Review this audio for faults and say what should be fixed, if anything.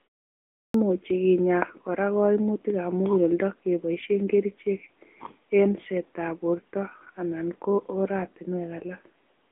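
The AMR narrowband mobile codec runs throughout: nothing passes above 3.8 kHz, and the speech sounds buzzy and synthetic, which fits a mid-rate AMR-NB mode around 10 kbps. A simple low-pass would dull the sound without adding that buzz. Carrying the call over a wideband codec would prevent it.

There is a clipped start after a pause at 0.64 s. After 0.64 s of silence, about 103 ms of the onset is missing while the output wakes. Here, speech itself is lost. Keeping the output device awake through silences would prevent it.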